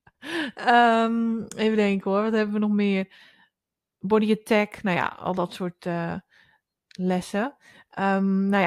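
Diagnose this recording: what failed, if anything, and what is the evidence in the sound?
Nothing failed in this recording, and the sound carries no evidence of any fault.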